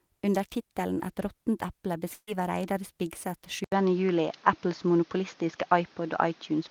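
Right after "råttent eple", from 2.13 to 2.29 s, the last sound is held and fades away over about 140 ms, then drops into a 30 ms silence before the speech picks up again with about 140 ms skipped. This is a burst of packet loss, concealed by stretching the last audio that arrived.

From 3.64 s to the end, the speech turns duller and narrower, with nothing above 6.8 kHz. The level shifts by around 5 dB, a new noise floor sits roughly 30 dB below the speech, and an 80 ms silence marks the join. The likely cause is the input switching to a poorer device.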